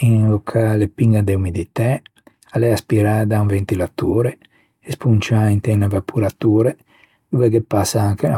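No technical faults are audible.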